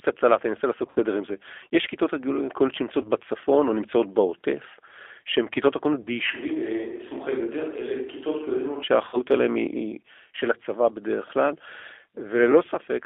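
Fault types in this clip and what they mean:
G.729 codec: Throughout, the speech sounds narrow, slightly rough and synthetic, with nothing below about 300 Hz or above 3.5 kHz. The damage is plainly audible. The character fits G.729A at 8 kbit/s, a VoIP codec that doesn't send the waveform. Instead it rebuilds each 10 ms stretch from a vocal tract filter, a pitch predictor and a handful of pulses, so fine detail is replaced by an approximation.
VoIP packet loss concealed by the speech codec: Brief buzzy or smeared patches that fade in level break the speech at 0.86, 3.02, 6.03 and 9.09 s. The first is the longest: about 70 ms of audio missing, spread over roughly 100 ms. The others are shorter, at 20 to 40 ms each. When packets go missing, the decoder extends its last pitch and filter settings with falling gain. Because each frame builds on the previous one, the sound stays weakened briefly afterwards.
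Switch to a distant microphone: From 6.32 s to 8.83 s, the speech suddenly turns hollow and roomy, with thinner bass. The level drops by roughly 10 dB, and background room noise rises to around 30 dB below the speech. The change back at 8.83 s is just as abrupt. The likely cause is that the close microphone's signal failed or was dropped, so the recording briefly fell back to a microphone farther from the speaker.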